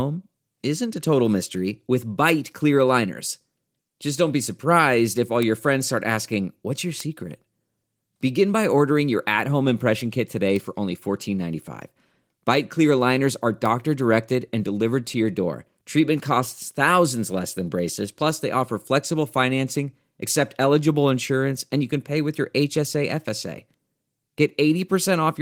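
At 7.00 s a bit error spike, one flipped bit in a single sample, gives a sharp tick: a one-sample spike on the waveform and a thin full-height vertical line on the spectrogram.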